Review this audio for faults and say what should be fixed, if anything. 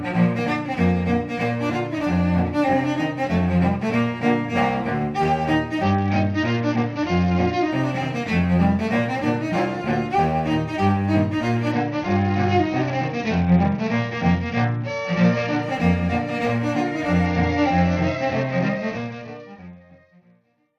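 The Bluetooth link came under congestion and the encoder cut its SBC bit pool. This caused a Bluetooth SBC bit pool drop at 5.83–7.71 s, 11.72–15.63 s and 17.26 s to the end. The upper sub-bands were starved and the rest coarsely quantised, which fits a fall to about 72 kbps. The treble dulls and gritty noise rises, persisting under the closing fade-out from around 19 s. Keeping the Bluetooth link clear of interference and congestion, or recording over a wired path, prevents this.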